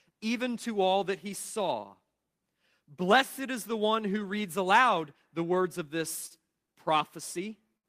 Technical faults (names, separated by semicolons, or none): short stall from a late packet; burst of packet loss